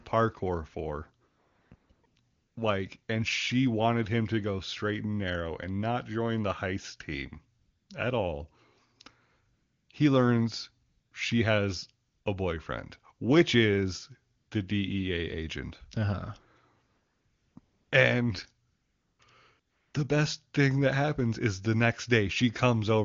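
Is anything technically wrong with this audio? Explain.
Yes. AMR comfort noise appears fourteen times between 1.27 s and 19.93 s, in gaps of 100 to 660 ms clustered around 1.3 to 2.6 s and 16.9 to 19.9 s. Judging the talker silent, the sender stopped transmitting speech, so the receiver substituted smooth synthetic hiss for the real background, switching in and out around phrases such as "join the heist team". The speech itself sounds clean, consistent with high-rate AMR wideband.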